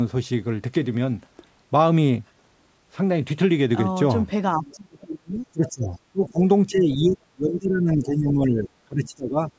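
From 4.56 to 5.92 s the speech is suppressed in double talk. It dips by as much as about 25 dB in pieces adding up to roughly a second, most likely because the echo canceller, faced with both sides talking at once, turned everything down. The same gating returns briefly from 6.12 to 6.41 s, and again from 6.67 to 9.41 s, with drops near 20 dB over about two seconds. Unlike a network dropout, the talker's level pumps and thins rather than vanishing cleanly, and it tracks the far side's activity.

Around those stretches, the other side's voice leaks through. A faint scrap sits at 4.65 to 4.74 s, about 30 dB under the speech. A more audible stretch runs from 5.67 to 5.99 s at about 20 dB down, and a short fragment around 6.91 to 6.96 s sits about 25 dB down. This is likely residual loudspeaker echo that the canceller failed to remove. What separates it from suppression is that something is added rather than taken away: a second voice beneath the talker, band-limited like the rest of the call audio, which has nothing above 8 kHz.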